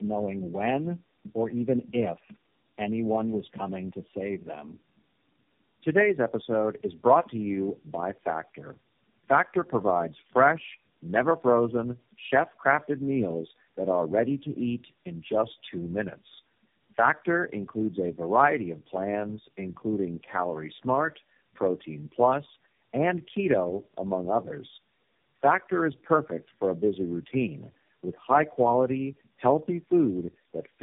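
Speech, degraded from start to finish by tandem speech coding. It sounds rough, muffled and warbly, which fits four low-rate speech codecs in a row, along the lines of G.729A, AMR-NB and iLBC, with G.711 hops between them. Each coder re-encodes the previous one's damaged output, so the errors pile up. A spectrogram shows a hard ceiling at 3.7 kHz and smeared, wobbling harmonics instead of clean striations.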